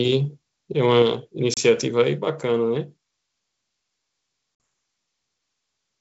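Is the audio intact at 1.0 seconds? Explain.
No. A microphone volume stepped down at 1.02 s, where the whole sound drops about 4 dB at once, likely from the call software lowering the input gain.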